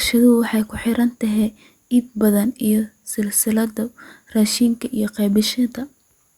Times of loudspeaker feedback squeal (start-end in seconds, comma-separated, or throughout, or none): none